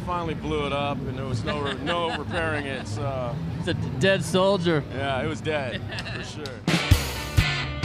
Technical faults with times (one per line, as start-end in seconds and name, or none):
none